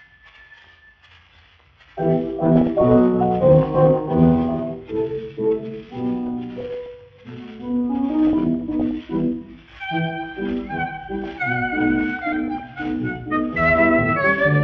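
Weak DAB reception lets bit errors, at roughly a few tenths of a percent, slip past error correction into the MP2 audio data. Corrupted samples put short blips of noise into single sub-bands, and corrupted scale factors throw individual sub-bands up or down in level for up to a frame. The result is DAB burbling laid over the sound, in four bursts: 2.46–2.82 s, 6.28–6.86 s, 8.27–8.91 s and 12.19–12.75 s.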